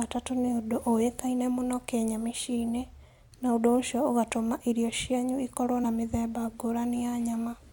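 A speech recording with one fault: damaged data in a compressed stream at 5.83 s. It is heard as a very short blip lasting about 18 ms. At that point part of the encoded stream has been corrupted. The decoder cannot read the affected frame correctly, so it outputs garbage for a moment, loses sync and locks back on at the next valid frame header. After that, decoding continues.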